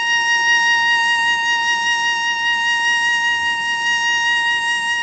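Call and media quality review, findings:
No faults found in the music; nothing above 8 kHz, which fits a wideband G.722-type call path, with that codec's ordinary coding noise present.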